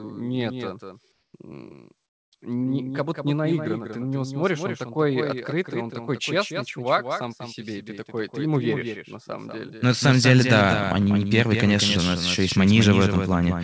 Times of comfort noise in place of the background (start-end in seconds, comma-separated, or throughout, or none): 1.12-1.34